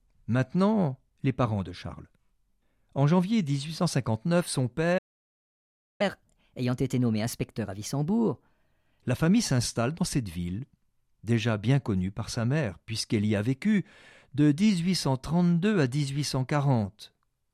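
At 4.98 s the speech halts in mid-flow and the output stays silent for about 1.02 s, until 6.01 s. That is a playback stall, most likely the player running short of buffered data. A full second of silence sets it apart from a brief dropout.

From 6.01 to 9.01 s the player works off its backlog as a catch-up at higher speed, resampling at 1.15 times normal rate. Tempo and pitch rise together, about two semitones, then both settle back. That joint rise separates it from time-stretching, which keeps pitch steady.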